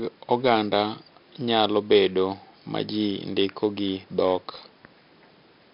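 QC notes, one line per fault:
Throughout: 4-bit ADPCM compression. Each sample of the speech is coded as a small step from a predicted value, and the step size adapts as it goes. The leftover error is a gritty hiss that rises and falls with the speech level. It is heavy here, and hard onsets smear where the step cannot grow fast enough. Nothing is heard above 5.3 kHz, which fits a sample rate near 11 kHz and a bitrate of about 44 kbps. The result is dull and rough.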